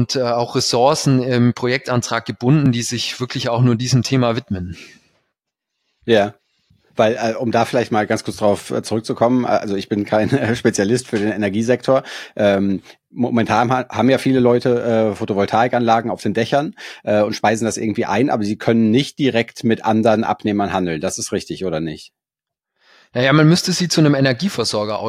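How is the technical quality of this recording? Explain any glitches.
No glitches are audible anywhere in the recording, so there is nothing to report.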